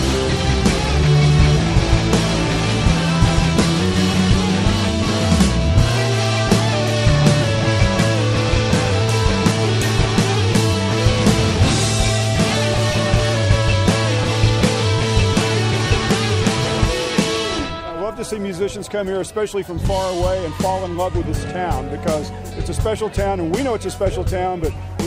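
Nothing in this one jumps out as a technical problem; the audio just rolls along without a hitch anywhere you listen.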